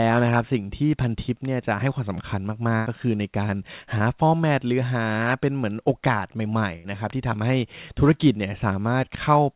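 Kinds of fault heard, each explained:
Burst of packet loss: 100 ms at 2.76 s and 80 ms at 6.76 s vanish, bridged by a fading continuation of the last sound rather than silence.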